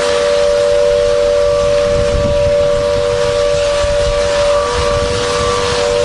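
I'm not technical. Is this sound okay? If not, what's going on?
Yes, nothing stood out as a problem when listening to this sound.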